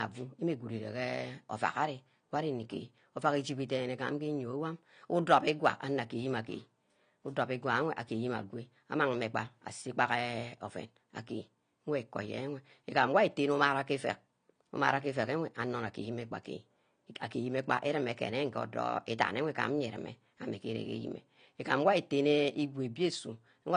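From start to finish the speech has nothing above about 9.9 kHz and carries a smeared, swirly coding texture. That's likely low-bitrate audio saved at a high bitrate: a lean first encode, around 32 kbit/s AAC, re-wrapped as generous MP3 that can't restore what was stripped.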